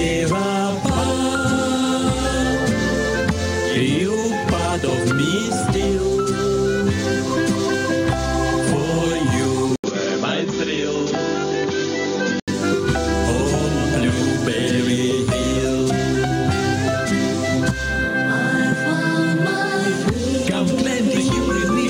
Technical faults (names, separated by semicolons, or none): input switched to a poorer device